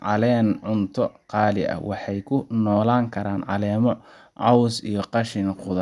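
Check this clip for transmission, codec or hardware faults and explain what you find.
Nothing faulty turns up in the speech: the signal stays continuous and steady throughout, with no audible damage at any point.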